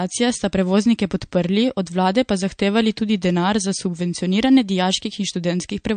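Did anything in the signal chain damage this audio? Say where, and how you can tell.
Yes. The damage is at the codec stage and runs through the whole clip. Nothing in the speech reaches above 9.1 kHz, a hard treble cut rather than a gradual roll-off. The sibilants have a watery, swirling quality, and the attacks are smeared. This is likely MP3 compression: short of bits, the encoder drops the top band and zeroes weak frequency lines from frame to frame. The damage is plainly audible, which points to a low bitrate of roughly 48 kbps.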